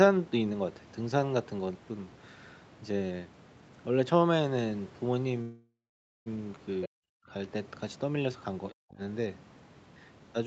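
A call audio freeze from 5.41 to 6.28 s interrupts this speech recording. Delayed packets most likely drained the jitter buffer, so the last sound was stretched into a fading fill that sits silent for about half a second. The talk then resumes where it stopped, nothing lost, just pushed back by about 0.85 s. At 6.82 to 6.88 s the other side's voice leaking through appears as a brief scrap about 15 dB below the talker, likely loudspeaker playback that the echo canceller failed to fully remove from the microphone. Speech suppressed in double talk follows at 6.87 to 7.31 s and again at 8.78 to 9.01 s. Here the talker's level collapses by as much as about 40 dB, likely because the canceller, unable to tell the talker from the far-end echo while both were active, turned everything down.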